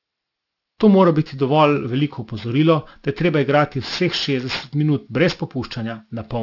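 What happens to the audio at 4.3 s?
At 4.3 s you're hearing aliasing, and it runs through the whole clip. The speech was taken down to 12 kHz without a proper anti-alias filter, so everything above 6 kHz folds back as wrong, unrelated frequencies, roughly 20 dB under the signal, making sibilants gritty and metallic.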